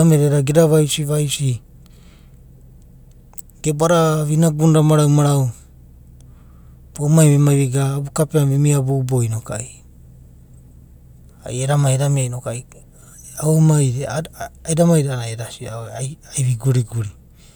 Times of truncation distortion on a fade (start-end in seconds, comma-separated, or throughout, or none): none